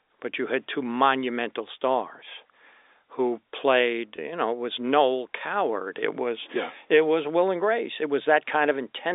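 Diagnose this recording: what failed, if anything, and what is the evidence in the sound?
Packet loss with pitch repetition at 4.16 to 4.18 s, between "who played" and "you know it was", is a network-stage fault. About 20 ms of audio never arrived, which fits two 10 ms packets, and the receiver bridged the gap by repeating the last pitch period of the speech. The result is a brief held, slightly buzzy sound where the voice should have moved on. The narrow telephone band of the G.711 path can be heard throughout.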